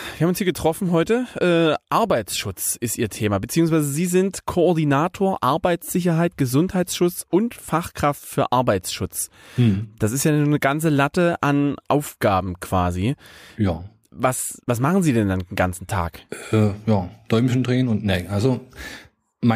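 Nothing here trips a technical alarm: the speech runs along steadily with no glitch, dropout or distortion to point to at any moment.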